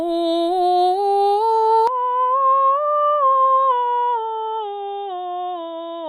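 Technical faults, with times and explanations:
1.87 s to the end, input switched to a poorer device: the music abruptly turns duller and boxier with no gap, loses everything above 3.8 kHz, drops roughly 10 dB and gains a faint new noise floor, likely because recording moved to a narrower-band microphone.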